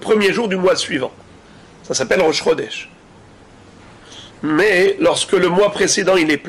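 No technical faults can be heard anywhere here.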